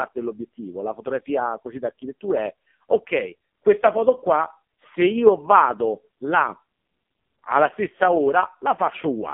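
Throughout the clip, the speech carries heavy AMR narrowband mobile codec damage. Nothing passes above 3.4 kHz, and the voice turns buzzy and synthetic, which fits AMR-NB's lowest 4.75 kbps mode. A plain telephone-band filter would dull it without that robotic, pulse-driven rasp.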